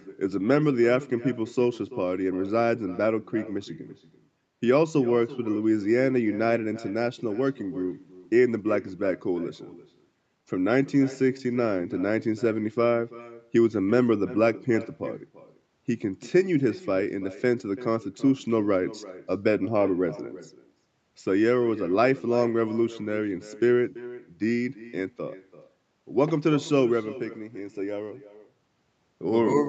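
From start to finish, every phrase is trailed by a faint, hollow copy of itself, arriving roughly a third of a second later and sitting about 18 dB below the speech. That delayed shadow is echo with no canceller: the far end played the call over a loudspeaker, its microphone captured it, and nothing subtracted it before it travelled back. The echo, like the direct speech, stops at 8 kHz, the limit of the call's coded bandwidth.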